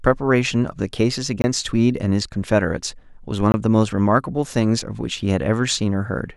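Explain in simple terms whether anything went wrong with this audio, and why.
Two short dropouts interrupt the speech, at 1.42–1.44 s and again at 3.52–3.54 s. Each is a block of digital silence: for about 20 milliseconds the audio is replaced by silence, most likely because the playback software didn't fill its buffer in time. The sound cuts out and back in abruptly with no fade, so you hear a brief dropout at each spot, usually with a click at its edges.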